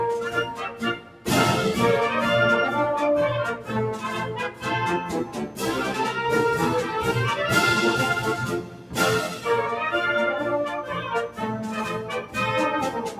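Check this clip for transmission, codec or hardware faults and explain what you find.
There are two related faults, both from a speech-tuned processor acting on non-speech material.

Noise suppressor applied to music or sounds, throughout: a speech-oriented noise suppressor stays engaged and treats sustained tones, ambience and decay as noise to remove. Its gain keeps moving, with the level swinging by around 10 dB, so the sound pumps and thins while sharp onsets pass.

Sound cut by the noise suppressor, at 0.50–1.27 s, 4.50–4.66 s, 5.25–5.62 s, 8.61–8.97 s and 9.29–9.46 s: here the suppressor judges the material to be noise and clamps harder, up to about 8 dB (about 6 dB in the last). Held or fading sound sinks and tails are cut short.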